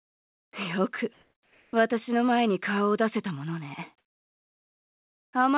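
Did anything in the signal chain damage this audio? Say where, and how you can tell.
Yes. At the call-processing stage, comfort noise replaces the background from 0.0 to 0.53 s and from 1.13 to 1.73 s. The detailed ambience turns into steady, featureless hiss, about 28 dB quieter in the first stretch and about 2 dB in the second. A noise gate would leave silence instead. The likely cause is discontinuous transmission.

At 0.51 s the returning sound starts abruptly, with roughly its first 20 ms missing and no soft attack. A packet dropout would punch a gap mid-sound, but here only the beginning is missing. This is likely onset clipping by a voice detector that reacted slowly, heard over the call path's 4 kHz band limit.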